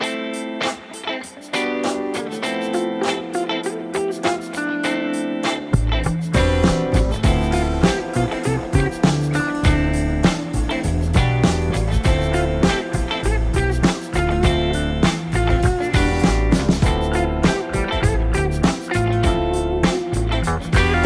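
Nothing here needs fixing: the audio holds together steadily the whole way, with no technical faults to report.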